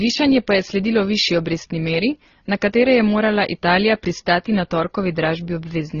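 Throughout the speech, two sets of codec artefacts overlap: a band-limited, dull top end and smeared detail. This is likely transcoding between lossy codecs, consistent with low-rate MP3 followed by Opus.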